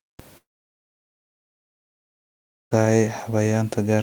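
A long network dropout runs from 0.37 to 2.73 s, likely from audio packets failing to arrive. The last speech sound stretches into a brief fading buzz, then about 2.3 s of silence, and speech resumes with that portion missing.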